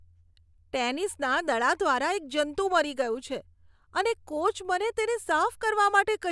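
No audible technical faults.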